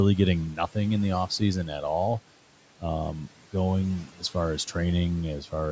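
Speech cut by the noise suppressor occurs between 4.07 and 4.35 s. The call's noise suppressor mistook part of the speech for background and pulled it down along with the room noise, which sits about 22 dB below the voice. Over roughly 150 ms in that span the level dips by up to about 12 dB, so the sound there comes across as swallowed and faint, with its softer parts thinned out.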